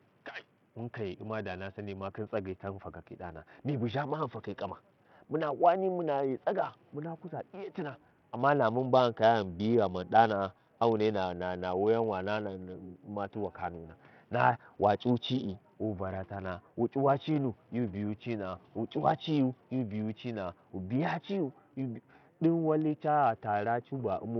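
From start to end the speech has a gritty, smeared top with treble flickering in and out, likely from heavy Bluetooth SBC compression at a small bit pool, consistent with roughly 64 kbps. A spectrogram shows patchy, blocky upper bands above a few kHz, while room noise sits about 37 dB down.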